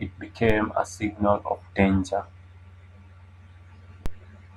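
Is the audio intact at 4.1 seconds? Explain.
No. A DC step at 4.06 s shifts the waveform's zero line by about -16 dBFS, then decays back as a 5 Hz high-pass drains it. It is heard as a low thump, seen as a sudden baseline jump, and shows up as a brief low-frequency smear on a spectrogram.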